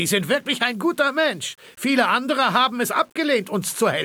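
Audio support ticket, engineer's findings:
Grainy, signal-following distortion throughout; quiet passages gritty, noise around 40 dB below signal. Low bit depth without dither, likely rounding to roughly 9 bits, error tracking the waveform.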